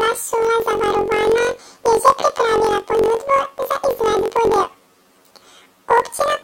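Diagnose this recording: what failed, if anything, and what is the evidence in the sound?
Sample-format conversion failed: planar audio read as interleaved. Throughout, the speech is an octave high, with a robotic buzz at 45.9 Hz. This fits 21.77 ms blocks, each replayed as left then right at double speed.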